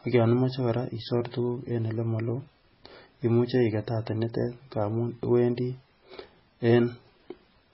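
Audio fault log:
Throughout, transcoding between lossy codecs: the speech has nothing above 5.5 kHz, with swirly, watery smearing under a second layer of fine warbling grain. The layering is likely from a very low-bitrate MP3 encode, around 16 kbit/s, later re-encoded as AAC-LC at a higher rate, near 48 kbit/s. The extra bits cannot restore the lost top or clean the earlier smearing, so that damage remains. Two distinct artefact textures mark this apart from one poor encode.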